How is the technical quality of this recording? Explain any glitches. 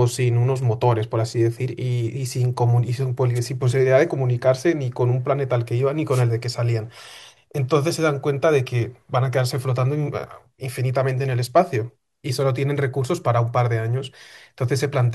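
The speech recording has two brief glitches, both wireless microphone noise hits: 3.35 to 3.40 s and 6.10 to 6.23 s. The FM radio link fades, receiver noise surges as a swish of static, and a spectrogram shows broadband vertical smears.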